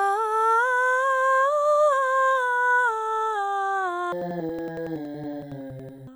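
From 4.12 s to the end at 6.15 s, the music drops an octave and turns doubled and choppy, the signature of interleaved audio read as planar. Each block of alternating left and right samples is split into halves treated as separate channels, so both play at half speed. The blocks are long, about 93 ms, which fits 4096 samples, so the octave shift is clear and the chop recurs near 10.8 Hz. Unlike a sample-rate mismatch, the overall tempo holds steady.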